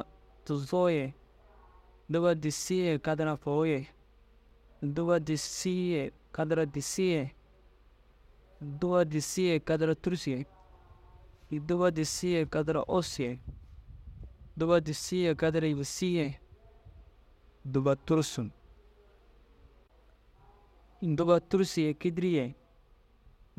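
At 4.49 to 4.51 s, a 10 ms chunk of audio was delivered one chunk late and played after the chunk that should have followed it, leaving the speech out of order. Nothing is missing, but the swap creates three hard joins, heard as a brief jumbled flicker.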